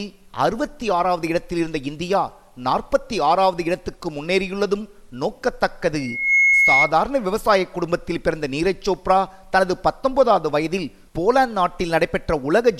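A loudspeaker feedback squeal takes over from 5.97 to 6.93 s: a 2.2 kHz tone swells within half a second to a few dB above the audio, as the mic-speaker loop runs away.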